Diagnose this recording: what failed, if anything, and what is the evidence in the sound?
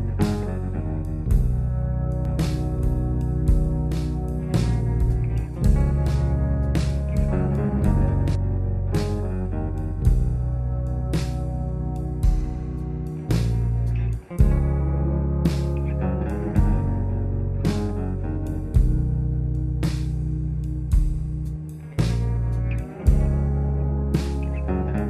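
Between 2.25 and 8.35 s there's a doubled audio track: a second full-band copy of the sound trails about a second and a half behind, a few dB under the original, with no decay or room colour, and it cuts in and out abruptly at those two points. That points to the capture or edit stage, most likely the signal being picked up again through a slower path, or an edit leaving two out-of-step copies stacked.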